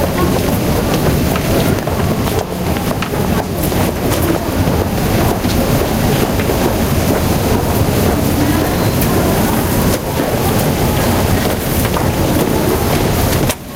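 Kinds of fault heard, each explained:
Gain pumping: The gain is pulled down each time a loud sound arrives and recovers between them, so the level breathes up and down across the whole clip, swinging by roughly 10 dB. Loud and soft moments sit unnaturally close together and the sound feels squashed. The likely cause is input gain set far too high, with a fast limiter or compressor clamping it on every peak and releasing it between them.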